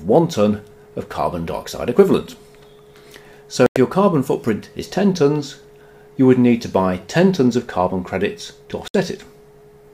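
At 3.66 s and again at 8.88 s the sound mutes abruptly in a digital broadcast dropout, lasting about 96 ms and 64 ms. The receiver lost valid frames and silenced output until clean data resumed. The short gaps suggest two or three lost frames each.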